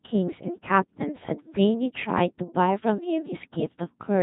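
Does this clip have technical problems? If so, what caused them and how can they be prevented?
Yes, Codec 2 vocoder damage runs throughout: the speech is resynthesised from sine waves, so it's heavily buzzy and robotic, cut off above 3.8 kHz, which fits about 2.4 kbit/s. To prevent it, use a waveform codec such as Opus whenever the link has the bandwidth.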